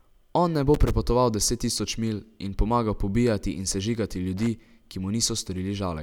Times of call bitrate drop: none

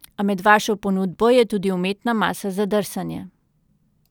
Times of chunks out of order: none

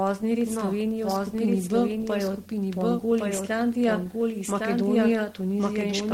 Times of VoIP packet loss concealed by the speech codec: none

